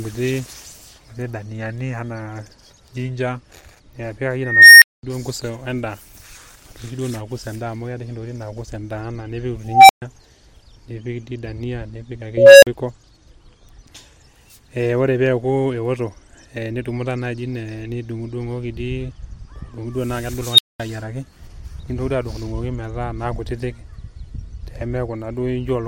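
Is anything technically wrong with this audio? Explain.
Yes. An unstable filter disrupts the speech four times: 4.41–5.03 s, 9.64–10.02 s, 12.37–12.67 s and 20.51–20.80 s. A recursive filter with bad coefficients feeds back on itself. A tone of about 2 kHz, 700 Hz, 500 Hz and 4 kHz respectively swells over 410, 250, 250 and 70 ms, then clips. The output then drops to silence for 210, 130, 40 and 210 ms until the filter resets.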